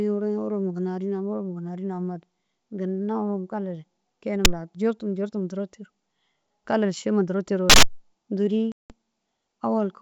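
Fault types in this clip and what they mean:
Phantom power thump: two deep thumps, at 4.45 s and 7.70 s, dying away in roughly 24 and 44 ms, caused by a supply voltage step reaching the input.
Packet loss on an ADPCM call: a hard-edged 180 ms silence at 8.72 s, after which the sound returns unsettled because the decoder's predictor lost track of the sender's.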